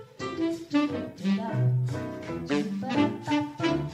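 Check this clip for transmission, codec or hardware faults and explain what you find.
No faults can be heard in this clip. There is nothing to report for any part of it.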